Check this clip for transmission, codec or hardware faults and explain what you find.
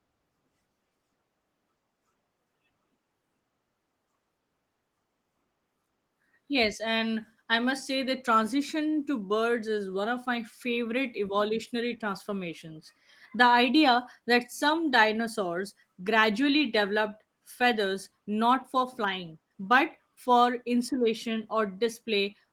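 No transmission, codec or hardware faults can be heard anywhere in the speech. The Opus voice compression is working as expected, with the hybrid mode keeping the full audio band and leaving only light coding traces, consistent with a bitrate around 20 kbps.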